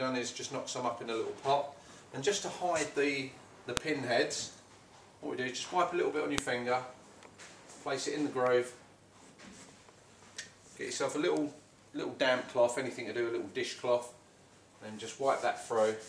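A brief, sharp click cuts through the sound at 3.77 s and again at 6.38 s, regardless of what the audio is doing. This is a file header played as audio: separately saved WAV pieces were joined without stripping their headers, so those header bytes were played back as samples.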